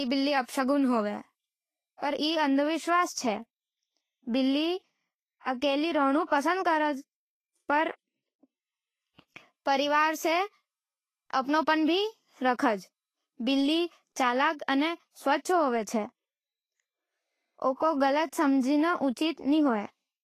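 Throughout, the speech sounds hissy and grainy with nothing above 14.2 kHz, likely Vorbis compression near 28 kbps coarsely quantising the treble into noise.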